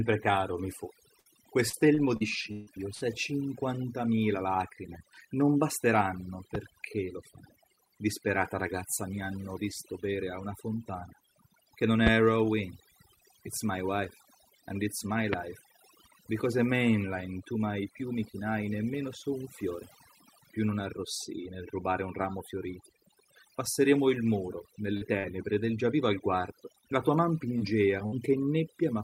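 The whole take has overdone noise removal running through it. The suppressor was set so hard that it pulls individual frequency bands right down whenever they look like noise. The background drops away and breaks up into little twinkling specks.

Right at the start, just after "caro mi fu", there's a burst of packet loss from 1.19 to 1.27 s. About 60 ms never arrived, and the receiver stretched the last bit of sound and let it fade. You get a brief held buzz or hiss before things jump ahead.

Hot on its heels, from 1.69 to 3.03 s, comes repeated packet loss with that robotic sound. There are five holes totalling about 300 ms, the longest 144 ms, and each is patched by extending what came before. That stretch turns choppy, with chunks missing.

Then there are three loud pops, most likely voltage spikes from a plug, switch, static or driver glitch. The first, at 6.55 to 6.58 s, sits between "cinquantamila lacrime non basteranno" and "lo fai disperata ragazza" and peaks about 15 dB above the speech. 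The second is at 12.07 to 12.09 s, after "una fontana che non", and the third at 15.33 to 15.36 s, both about 20 dB up. Each is a single sharp crack with the speech carrying on underneath.

Near the end, short concealed packet loss shows up four times: 24.97 to 25.03 s and 25.19 to 25.25 s, each about 40 ms missing, then 26.81 to 26.85 s and 27.59 to 27.62 s, about 20 ms each. The gaps were bridged by extending the last sound, so you hear small smears or wobbles, and a quick consonant can drop out.

Finally, another burst of packet loss hits at 28.06 to 28.14 s. Again about 60 ms is lost, heard as a short fading hold before the speech skips forward.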